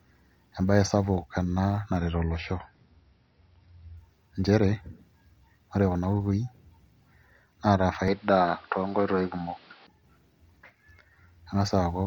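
From 1.97 to 3.97 s the adaptive stream dropped to a lower bitrate, consistent with a fall from about 128 to 24 kbit/s MP3. The speech abruptly loses everything above 5.8 kHz and takes on a swirly edge, with no gap at either change.

From 8.08 to 9.87 s the speech turns dull, losing everything above 5.6 kHz at much the same loudness. A faint new noise sits well below it. The likely cause is an input switched to a poorer device, and there is no silence at the switch.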